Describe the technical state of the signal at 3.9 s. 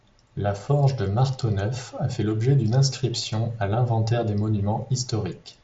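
At 3.9 s the audio is intact, with the speech carried through the Bluetooth mSBC headset codec and nothing heard above about 7.7 kHz.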